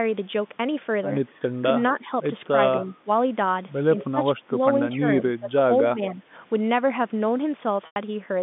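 What was likely an echo canceller caught in double talk, unable to separate the near talker from loudspeaker echo while the far side spoke, turns the speech down in short bursts. This speech suppressed in double talk occurs at 1.93 to 2.06 s, 2.9 to 3.08 s, 4.08 to 4.18 s, 4.45 to 4.6 s, 5.39 to 5.51 s and 5.82 to 6.23 s. The speech dips by roughly 10 dB in the first two, around 15 dB in the next three, and only slightly in the last, longer stretch.

At 7.86 s, 100 ms of audio goes missing, which fits a run of five 20 ms packets. This is packet loss with pitch repetition. The receiver bridges the gap by replaying the last pitch period, so the sound briefly holds as a buzzy, frozen tone, fades to silence over about 50 ms, and then rejoins the speech with a short cross-fade near 7.96 s.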